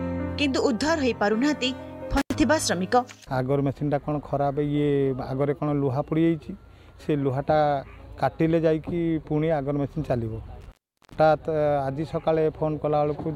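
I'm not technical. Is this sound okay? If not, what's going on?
No, there are two kinds of problem. First, an intermittent contact, meaning a loose cable or plug losing its connection for a moment. At 2.17 to 2.35 s the sound drops out for about a tenth of a second with crackle either side. At 10.61 to 11.17 s it happens again, with a longer gap of about 0.4 s.

At 6.99 s there's a tiny blip from damaged data in a compressed stream. A bit of the file got corrupted, so the player stumbled over it, lost its place briefly, and jumped ahead to the next good chunk.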